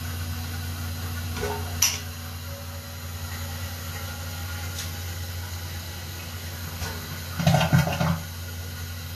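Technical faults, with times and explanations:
Throughout, Vorbis compression: the treble turns grainy and hiss-like, attacks are smeared, and nothing remains above 14.2 kHz. The likely cause is low-rate Vorbis coding, around 34 kbps, quantising high-frequency detail so coarsely that it becomes noise.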